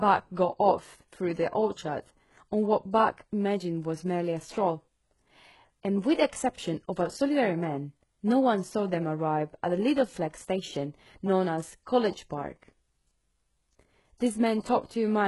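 From start to finish the speech carries heavy HE-AAC compression damage, likely from a very low bitrate near 12 kbps. Treble is rebuilt from copied lower bands, ending around 11.5 kHz, so sibilants sound gritty and metallic, with upper harmonics misaligned against the lower spectrum.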